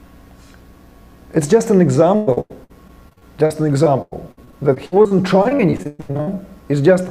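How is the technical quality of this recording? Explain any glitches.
Quality is hurt by repeated packet loss (robotic sound) from 2.15 to 6.29 s: dozens of short gaps, up to 120 ms each, were patched by stretching the preceding audio, so about 30% of that stretch is patched and it sounds choppy.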